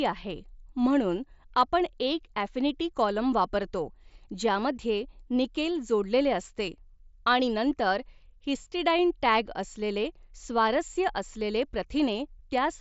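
No technical faults can be heard in the speech. It comes through a Bluetooth mSBC headset codec, which leaves nothing above 7.7 kHz and only a light trace of its coding.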